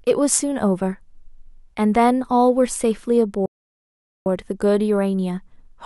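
At 3.46 s the speech just cuts out, and nothing comes through until 4.26 s, so there's a dead gap of about 0.8 s right in mid-flow before the talking picks up again. That's a playback stall. What's most likely going on is the player running dry of data, or its thread getting held up, so the output sits silent until it catches up and carries on.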